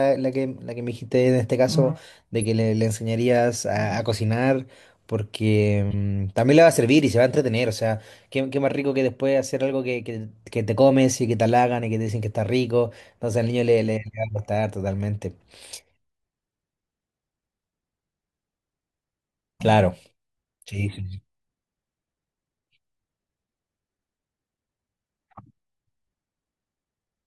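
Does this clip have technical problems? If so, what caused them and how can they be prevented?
Yes. The speech has two brief glitches from a corrupt frame being decoded, at 2.42 to 2.45 s and 5.91 to 5.94 s. Each lasts about 30 ms, roughly one codec frame, and peaks around -20 and -15 dBFS. Flipped bits made the decoder apply wrong gains and codes, putting energy at the wrong frequencies. Unlike a dropout, which goes silent, or a click, which is a sharp broadband tick, these come through as a chirp, squeak, blip or burst of noise. Checksums with frame concealment or forward error correction would prevent this.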